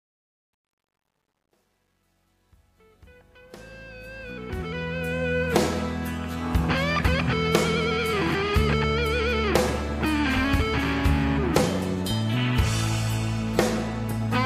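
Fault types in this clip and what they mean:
Truncation distortion on a fade: The fade-in begins at the start and reaches full level at about 5.39 s. The level stage drops its lowest bits and adds no dither, which fits an 11-bit path. Near silence, the waveform collapses into a few coarse square steps. From 0.0 to 3.75 s the quiet sound is gritty. The grain then eases as the level climbs, and it is gone once the fade completes.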